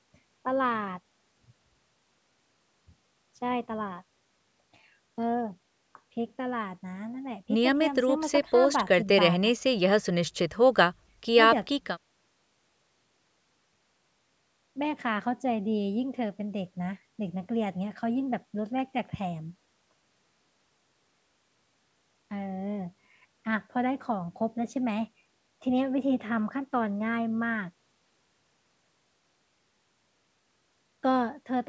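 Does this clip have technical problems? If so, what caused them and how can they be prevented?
No, this clip has no technical problems.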